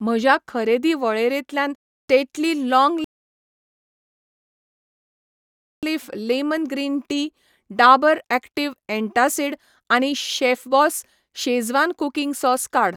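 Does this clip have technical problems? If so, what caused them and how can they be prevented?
Yes. A rebuffering stall occurs at 3.04 s. The player exhausted its downloaded audio and halted playback until more data arrived, so the speech drops to silence and stays there until 5.83 s. It then picks up exactly where it left off, with "लेमन ग्रीन टी डाबर", so nothing is missing, but about 2.78 s of dead air is inserted. A larger playback buffer or adaptive bitrate switching would keep data ahead of playback and prevent this stall.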